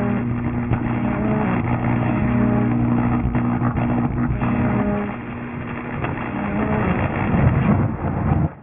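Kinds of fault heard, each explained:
Aliasing: Present throughout the clip, the sound was cut to a low sample rate with no filter first removing content above half that rate, and the band ends abruptly at 3 kHz, which fits a 6 kHz sample rate. Energy that belonged above 3 kHz is folded back below it onto wrong, unrelated frequencies, sitting only around 15 dB under the genuine content. Bright, hissy elements take on a gritty, metallic edge, and the spectrum stays dense right up to the cut-off.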